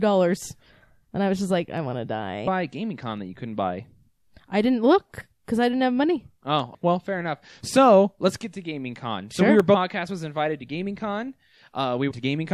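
At 1.78 s, between "I was just like" and "want to", a single sharp click cuts through the speech. It is likely dropped samples: a tiny fraction of a millisecond goes missing and the waveform jumps. At 2.46 s, right after "want to", a brief glitch appears. This is damaged data in a compressed stream. The decoder misreads corrupted frames, loses sync and hunts for the next header. The same dropped-sample click returns at 3.17 s, at 5.57 s after "I didn't look because", and at 6.60 s. Another glitch follows at 6.74 s. A last click comes at 9.60 s. The final corrupted-stream blip runs from 12.10 to 12.12 s.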